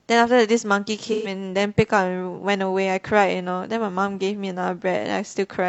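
Speech with AAC frame loss and concealment from 1.12 to 1.32 s: the decoder reuses the last good spectrum, giving a smeared, phasey patch instead of a dropout's hard silence.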